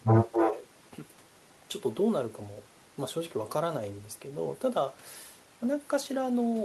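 Echo leak, from 0.07 to 0.55 s: a second copy of the speech trails the original by about 272 ms, and it is strong, only a few decibels quieter than the direct sound. The likely cause is a loudspeaker at the far end whose echo canceller failed to strip out what its microphone picked up, so part of that signal came back down the line. The result is a slapback doubling that smears the start of the clip.

Speech suppressed in double talk, from 0.25 to 0.64 s: while the echoed sound overlaps the talker, the speech dips by a few decibels in patches totalling roughly a third of a second, so it sounds briefly pulled back. Here the echo canceller likely could not separate the near talker from the returning echo and turned both down together, so the suppression caught the wanted speech along with the leak.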